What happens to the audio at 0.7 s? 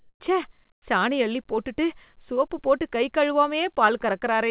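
Comfort noise replaces the background from 0.72 to 0.82 s, just before "சாணி அள்ளிப்போட்டுட்டு சோப்பு போட்டு". Likely the sender's discontinuous transmission stopped sending during the pause, so the receiver filled those 100 ms with steady, featureless synthetic noise, about 16 dB quieter than the real background.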